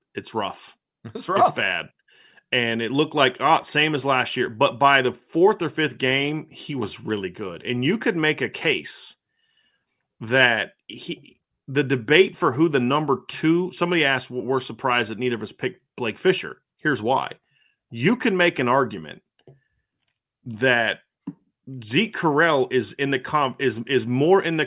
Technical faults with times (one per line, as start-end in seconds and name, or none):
none